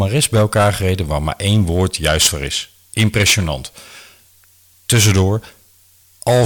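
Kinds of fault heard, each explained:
Hard clipping: speech peaks, overdriven by about 12 dB, are sliced flat throughout. Unlike soft saturation, that flat edge produces a harsh high fuzz on every loud syllable.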